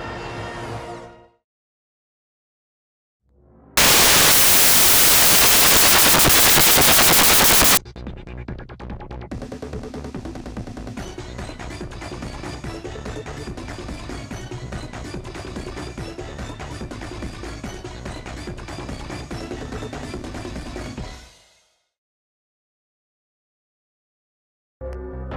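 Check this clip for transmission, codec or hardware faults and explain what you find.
There's one fault: samples built from the wrong bytes, from 3.77 to 7.77 s. For those four seconds the bytes of each sample are read back misaligned or swapped, so the jittery low bits land on top, and you get a blast of loud, harsh broadband noise.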